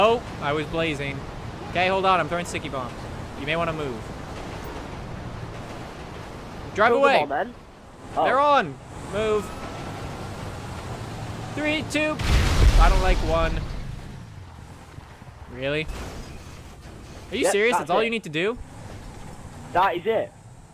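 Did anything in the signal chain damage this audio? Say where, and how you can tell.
No, nothing in the signal chain has audibly damaged this audio. Across every stage, from capture through to playback, the sound shows no point where something breaks in or drops away.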